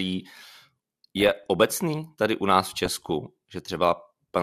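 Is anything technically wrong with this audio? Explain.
Yes. There are two bursts of DAB burbling in this speech: from 1.17 to 1.47 s, just before "obecný tady u nás", and from 2.85 to 3.15 s, right after "tady u nás v". Under weak reception, bit errors, here around 0.4 percent, slip past error correction into the MP2 data. Corrupted samples put short noise blips into single sub-bands, and corrupted scale factors make sub-bands jump in level, so each burst burbles over the voice. Each lasts about 0.3 s, which fits roughly a dozen corrupted frames. Dropout would leave gaps or silence, and low-bitrate swirl would run throughout. This damage comes in short bursts of erratic sub-band jumps.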